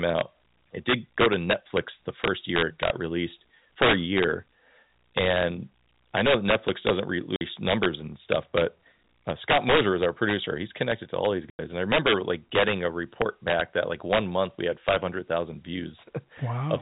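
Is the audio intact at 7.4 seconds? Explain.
No. From 7.36 to 7.41 s the speech drops into a 50 ms hole of dead silence, with hard edges. This is packet loss filled with silence: the receiver played nothing in place of missing audio, and the gap's length fits five lost 10 ms packets.

Around that moment the loudest peaks also crack sharply, much harsher than clipping. That is integer overflow. The level is pushed about 8 dB past the limit, so a small fraction of samples exceed the largest integer and wrap to the opposite sign instead of being held at the ceiling.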